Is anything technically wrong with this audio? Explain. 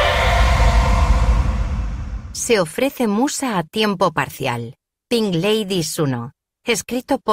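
No, nothing technically wrong is audible in this recording.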